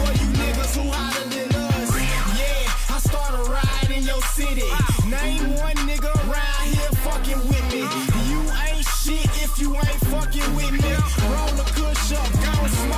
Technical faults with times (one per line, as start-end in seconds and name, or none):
none